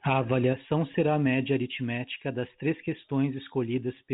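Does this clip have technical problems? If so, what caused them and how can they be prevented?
No, this speech clip has no technical problems.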